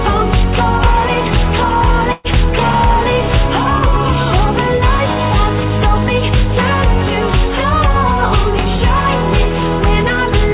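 At 2.12 s there's a burst of packet loss running to about 2.27 s. A short run of packets never made it in time, so the receiver stretched the last bit of sound it had for around 122 ms and faded it down, giving a held buzz or fading hiss instead of the real thing. When the audio comes back, roughly 120 ms of it is simply gone. You'll also hear the narrow band of the call path, with nothing above 4 kHz, which fits G.711 A-law.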